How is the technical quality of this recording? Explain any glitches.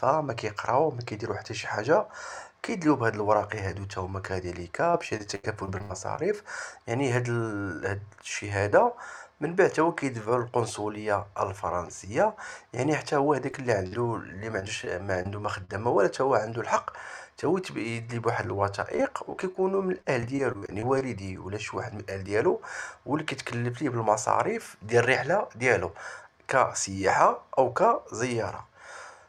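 The recording has clear network glitches. The connection drops packets at several points, and the receiver covers the holes by extending the last sound.

Repeated packet loss (robotic sound) happens three times. From 4.91 to 6.19 s there are 8 gaps totalling about 280 ms, the longest 80 ms, so about 22% of that span is patched. From 14.60 to 15.70 s, 4 gaps remove about 100 ms, the longest 37 ms. From 18.96 to 21.02 s, 11 gaps remove about 240 ms, the longest 39 ms. Each hole is filled by continuing the previous sound, and another hole arrives soon after. The result is choppy, with pieces missing.

Short concealed packet loss occurs from 13.51 to 13.55 s. About 20 ms never arrived in time. The decoder bridged it by carrying the last sound forward, then blended back into the real signal. It comes across as a brief smear or wobble, and a very short sound there could disappear.

A burst of packet loss follows at 13.87 to 13.94 s. 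About 40 ms in a row went missing. The receiver extended the preceding sound and turned it down across the gap. That leaves a short held buzz or fading hiss. The audio then picks up slightly further on, with the lost piece gone.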